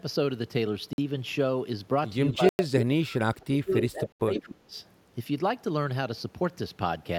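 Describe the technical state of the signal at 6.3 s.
At 6.3 s the speech signal is intact, with no audible fault at that moment.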